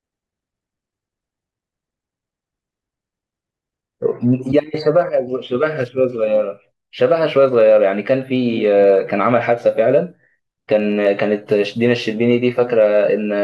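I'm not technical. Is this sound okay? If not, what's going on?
No. From 0.12 s to the end, there's a faint, steady rattle under the speech. These are clock slip clicks, about fifty tiny ticks a second. They likely come from two devices running on slightly mismatched clocks, so single samples keep getting dropped or repeated.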